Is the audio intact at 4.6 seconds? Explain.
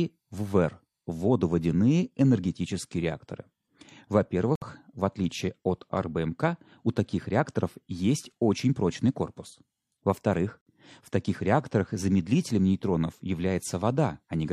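No. From 4.55 to 4.62 s there is a gap between stream segments: the time stamps of two adjacent segments do not meet, leaving a 64 ms hole that the player fills with silence. The speech stops abruptly and resumes just as abruptly, with hard edges on both sides of the dropout. Nothing is actually missing from the audio; the silence is inserted time, so everything after it arrives slightly later than it should.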